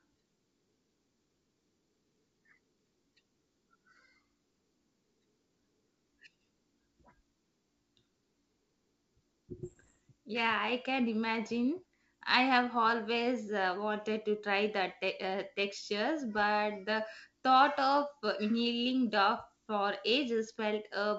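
At 9.64 s the speech breaks up for about a third of a second, to 9.96 s, with bit errors on an ADPCM link. You hear pops and a rough, gritty burst, with the level jumping around briefly. Each flipped bit throws off the decoder's step size and prediction, so the damage smears on for a few milliseconds rather than staying a single click. The error rate here is somewhere under one percent. The G.722 coding underneath, at 64 kbit/s, sounds clean.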